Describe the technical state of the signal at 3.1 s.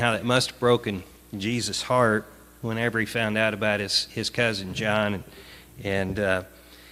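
At 3.1 s the signal is intact, with no dropout, distortion or other audible fault at that moment.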